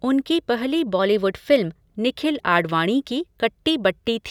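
From 0.99 to 1.82 s the speech suddenly runs about 6% fast and sits roughly a semitone sharp (104 cents), then snaps back to normal. That's likely a drift correction step, where clock-matching software briefly changed the playback rate to rebalance its buffer.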